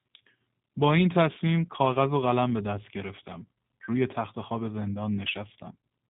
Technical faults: G.729 codec

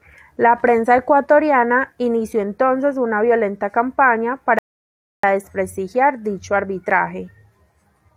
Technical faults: rebuffering stall

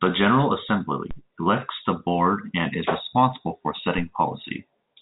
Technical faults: DC step

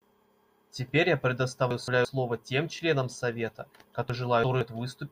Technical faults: chunks out of order

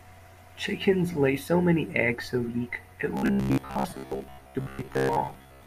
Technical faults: robotic sound from repeated short buffers

